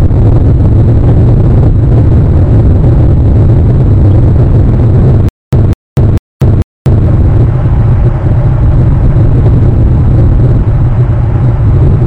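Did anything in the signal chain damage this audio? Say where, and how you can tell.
Yes. From 5.29 to 7.06 s there is a stutter with silent gaps: the same 204 ms burst plays four times, each followed by 241 ms of digital silence. The waveform shows identical blocks between flat silent lines. The cause is likely a playback stall re-sending its last buffer.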